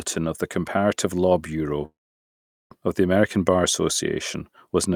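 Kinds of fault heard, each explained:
Call audio freeze: the speech stalls from 1.85 to 2.72 s, a brief fading hold then about 0.78 s silence, before "of the"; likely delayed packets; waveform shows flat gap.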